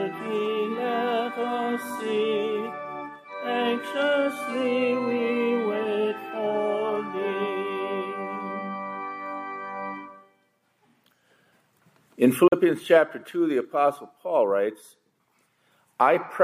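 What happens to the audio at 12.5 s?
At 12.48 to 12.53 s the output cuts to silence for about 50 ms, then resumes as if it had kept playing. This is likely a Bluetooth dropout, where a couple of packets failed to reach the headphones in time. The waveform shows a flat gap, and the spectrogram shows a full-width vertical blank strip.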